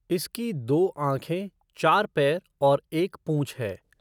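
No technical faults can be heard anywhere in the recording. There is nothing here to place on a timeline.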